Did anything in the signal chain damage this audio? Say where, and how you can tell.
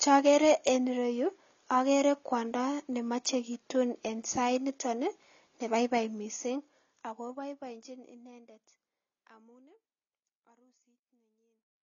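Yes. The damage comes from the codec stage, likely AAC compression at a low rate, which fits AAC-LC near 24 kbps. Throughout the speech nothing survives above 7 kHz, and coarse quantisation plainly dulls sibilants and makes sustained sounds warble and fizz. The gentle fade-out from around 6 s to 11.8 s is an ordinary edit.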